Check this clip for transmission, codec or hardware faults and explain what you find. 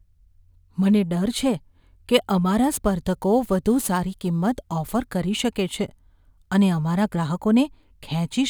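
One fault: crude rate conversion from 2.71 to 5.06 s. Samples were dropped or repeated with no filtering, which fits a 48 kHz to 44.1 kHz change, leaving a gritty, inharmonic fizz about 25 dB below the speech that tracks its louder and brighter sounds.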